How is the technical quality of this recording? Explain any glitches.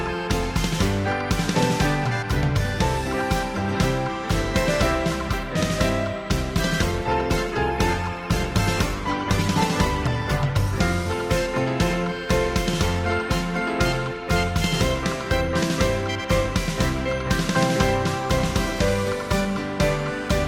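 The recording has one glitch: a stretch where the stream drops to a lower bitrate. From 6.5 to 10.5 s, an adaptive stream at a lower bitrate takes over. The player switched to a cheaper encoding for four seconds, presumably because the connection slowed. Codec artefacts increase. The sound suggests a move from roughly 64 kbit/s Opus to about 16 kbit/s. Quality changes abruptly at both boundaries, with no gap or dropout.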